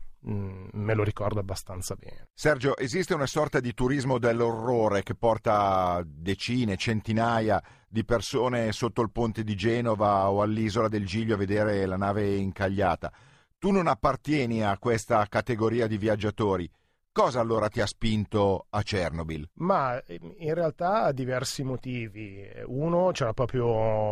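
No technical faults can be heard in this recording.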